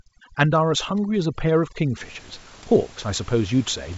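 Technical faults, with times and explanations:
0.0 to 2.0 s, overdone noise removal: The gaps fall to near silence with twinkling specks. The noise reducer was set too hard against the room noise, which sits about 24 dB below the speech. It pulls individual frequency bands down whenever they come close to its noise estimate. Quiet parts of the speech fall under that threshold and vanish with the noise, and stray bands flicker on and off as specks.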